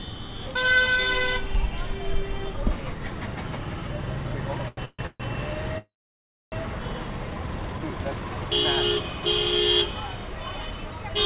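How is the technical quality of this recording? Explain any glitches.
The recording has a run of late-packet glitches between about 4.7 and 6.5 s, heard through a narrowband call path that passes nothing above 4 kHz, as G.711 mu-law at 64 kbps would.

At 4.68 to 4.79 s there is a short stall from a late packet. The jitter buffer ran dry, so the receiver stretched the last sound for about 91 ms, then resumed where it stopped. The sound is held a little too long with a slight buzz or dip. Nothing is lost, and unlike a freeze it never reaches silence.

Call audio freezes follow at 4.85 to 5.01 s, 5.07 to 5.22 s and 5.78 to 6.54 s. Packets were likely held up in transit, emptying the jitter buffer. Each time the last sound is continued as a fading buzz or hiss that decays to silence before playback resumes. The first two add about 130 ms each, with about 20 ms of silence. The last adds 740 ms, about 630 ms of it silent. 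This fade to silence is what sets them apart from the brief stall.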